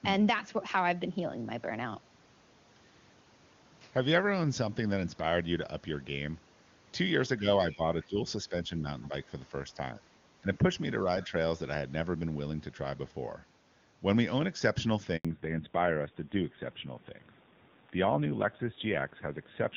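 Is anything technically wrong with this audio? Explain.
Yes, there are four kinds of fault.

Speech suppressed in double talk occurs at 7.39–7.47 s, 7.75–8.87 s, 10.41–10.72 s and 11.27–11.33 s. The level dips by roughly 5 to 10 dB, likely because the echo canceller attenuated the talker while both ends spoke.

The other side's voice leaks through faintly at 9.02–9.07 s, around 30 dB below the talker. It sounds like residual loudspeaker echo that the canceller did not remove.

A handover gap of 80 ms runs from 15.17 to 15.25 s. The audio drops to silence while the call switches networks, and no speech frames arrive during that time.

A fallback to narrowband follows from 15.25 s to the end. Nothing above 4 kHz remains, and the sound turns duller and rougher, consistent with a move from 23.85 kbit/s AMR-WB to 7.4 kbit/s AMR-NB.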